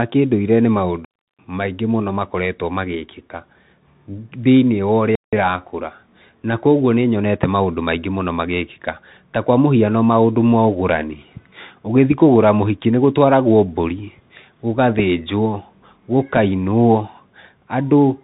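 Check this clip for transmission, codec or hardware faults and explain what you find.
Two faults are present: a narrowband Bluetooth headset codec across the whole clip, and two brief digital dropouts.

Throughout, the speech has been carried by the Bluetooth CVSD headset codec, which fits a 64 kbps link. Each sample is reduced to a single up-or-down bit with an adapting step. Nothing above 3.8 kHz survives, sibilants turn scratchy, and a grainy hiss sits beneath the speech.

From 1.05 to 1.39 s, and again from 5.15 to 5.33 s, there is a digital wireless dropout. The receiver lost too much data and muted for about 341 ms and then 174 ms. Each gap is a clean hole of near silence, with no noise burst on either side.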